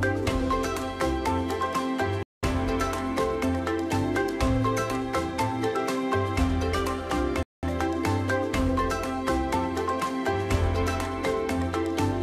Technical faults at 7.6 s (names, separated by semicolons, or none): gap between chunks